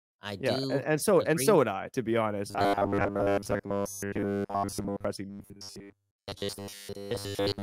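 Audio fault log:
2.51–5.05 s, robotic sound from repeated short buffers: after "be honest", audio likely arrived too seldom, so most of it was skipped while a roughly 10 ms slice kept repeating, forcing a metallic 100 Hz buzz.
5.30–7.63 s, robotic sound from repeated short buffers: audio likely kept arriving too seldom, with most replaced by repeated slices of about 10 ms, again imposing a rigid 100 Hz metallic buzz.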